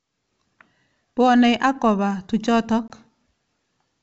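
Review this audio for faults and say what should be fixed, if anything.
Packet loss on the ADPCM call: about one packet, roughly 20 ms, dropped at 2.88 s after "ak koba tujotok". The silent gap knocks the decoder's predictor out of step, disturbing the sound until about 2.93 s. Adding packet loss concealment and periodic decoder state resynchronisation, or protecting the stream with redundancy, would prevent it.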